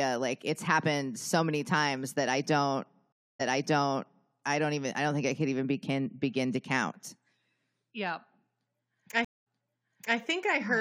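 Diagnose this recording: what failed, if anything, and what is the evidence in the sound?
Stream reconnect at 3.12 s and 9.25 s, at the network stage. The first reconnect follows "times that I don't" with 271 ms of silence, then the speech resumes 0.93 s earlier at "I don't even I". The second leaves 216 ms of silence and jumps back 0.72 s. In both, a fresh decoder restarted on audio the server resent.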